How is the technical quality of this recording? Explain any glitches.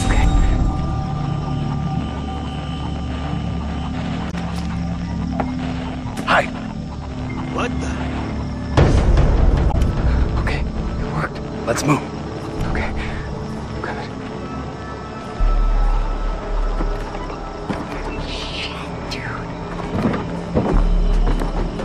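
Two short glitches mark the recording. Damaged data in a compressed stream, at 4.29–4.34 s and 9.70–9.75 s: corrupted bytes make the decoder misread frames and resync, giving a brief chirp, squawk, click or short hole.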